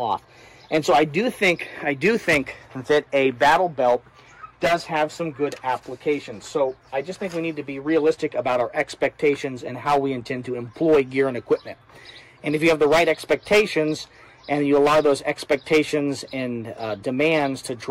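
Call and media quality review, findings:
Hard clipping throughout, whole clip. Signal overdriven by about 8 dB into a gain or conversion stage; peaks flattened, roughly 2% of samples at the ceiling. Flat tops add high harmonics: crackle on loud moments.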